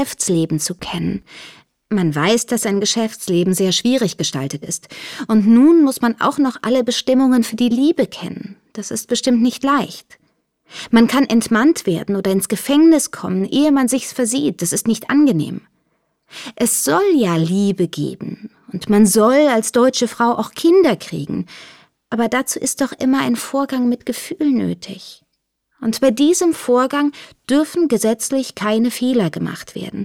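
No technical faults can be heard anywhere in the audio.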